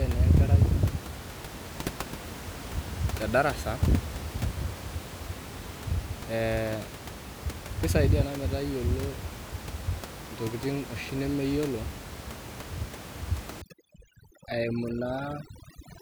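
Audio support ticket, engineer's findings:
Overdone noise removal, 13.62 to 16.02 s (runs to end). Background drops and breaks up into twinkling specks. Probable component: noise suppressor set too aggressive. Bands near its noise estimate get pulled down or gated, taking quiet speech detail with them. Context: room noise sits about 12 dB below speech, so the suppressor has plenty to grab.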